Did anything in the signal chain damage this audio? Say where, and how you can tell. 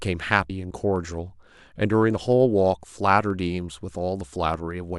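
Yes. At the driver or buffer stage there is a block size mismatch (truncated): a steady buzz at 23.5 Hz runs the whole clip, which fits 1024-sample blocks losing their tails at each handoff. The pace stays essentially normal, so this is not a resampling or clock-rate fault.

At the codec stage, compressed frames were skipped at 0.50 s. The speech jumps ahead by about 70 ms, roughly two 32 ms frames. A silent gap would instead point to a buffer dropout.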